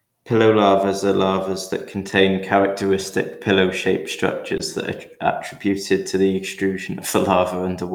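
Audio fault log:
4.57–4.61 s, short concealed packet loss: about 20 ms of the speech arrived too late to decode, and the receiver bridged the gap by extending the preceding sound before fading back into real audio. This produces a brief smear. On a spectrogram, the preceding sound runs unnaturally steady across that slot, with a soft waveform seam at the rejoin.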